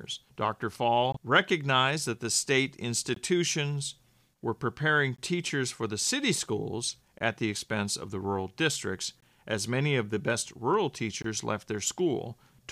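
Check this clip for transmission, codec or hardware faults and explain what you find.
The clip has one fault: a gap between chunks, repeating six times. Each is a 20 ms hole at 1.12, 3.14, 5.16, 7.18, 9.20 and 11.22 s. The 3.14 s gap follows "recognized that the state", the 7.18 s gap sits between "for the city schools" and "at the expense of", and the 11.22 s gap falls between "of the best rural" and "left their". The audio arrives in 2.0 s chunks with a short silence inserted at each join, so playback stalls briefly every 2.02 s without losing any sound. Each gap is heard as a brief, hard-edged dropout. On a waveform it is a flat, near-silent stretch with abrupt edges. On a spectrogram it is a thin vertical blank band across all frequencies, repeating at a fixed spacing.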